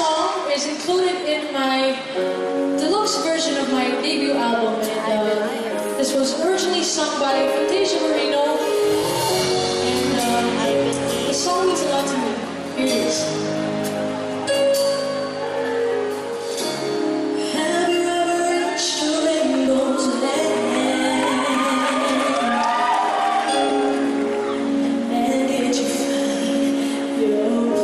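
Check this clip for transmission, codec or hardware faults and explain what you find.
Corrupt frames were decoded at four points: at 1.40 to 1.43 s, 3.99 to 4.02 s, 5.83 s and 23.65 to 23.71 s. Each time the decoder played a compressed frame with flipped bits, which puts energy at the wrong frequencies. Each event lasts only a frame or two and is heard as a short chirp or blip of noise. The last one is loudest, peaking around -10 dBFS; the others peak at about -15 to -20 dBFS.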